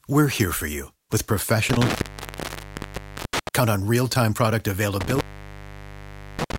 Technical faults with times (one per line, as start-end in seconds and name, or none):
1.70-3.49 intermittent contact
5.01-6.59 intermittent contact